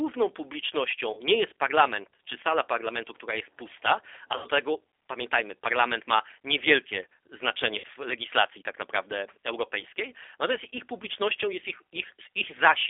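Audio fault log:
throughout: G.729 codec. The sound is boxed into a narrow phone band, roughly 300 Hz to 3.6 kHz, with the top end gone and a slightly rough, synthetic edge on the speech. That fits an 8 kbit/s codec that doesn't send the waveform itself. It rebuilds each 10 ms frame from a vocal tract filter, a pitch predictor and a few coded pulses, so detail gets smoothed into something buzzy but still clearly intelligible.
1.13–1.22 s, 4.36–4.46 s and 7.78–7.86 s: VoIP packet loss concealed by the speech codec. Each gap sounds like the last bit of sound being smeared into a fading buzzy tone or coloured noise rather than cutting to silence. The first comes just before "nie jest parlament czy", the second between "która jest pusta a" and "tego pamiętajmy parlament ma", and the third just before "legislacji tak naprawdę europejskiej". About 40, 80 and 60 ms of audio went missing, and the decoder filled each hole by repeating its last pitch and filter at falling gain. 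Because every frame builds on the one before, the sound stays weak or distorted for tens of milliseconds after the audio resumes.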